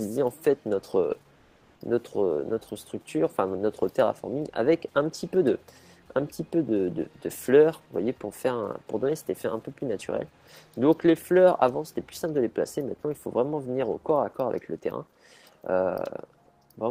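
At 1.35 s, the real background drops out for 400 ms, until 1.75 s. Comfort noise in place of the background fills the gap: a steady, featureless hiss, about 2 dB quieter. The likely cause is Opus discontinuous transmission pausing during a quiet stretch.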